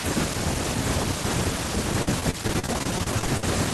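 Packets were repeatedly lost from 2.02 to 3.43 s, each gap filled by extending prior sound; this repeated packet loss makes the speech choppy and robotic.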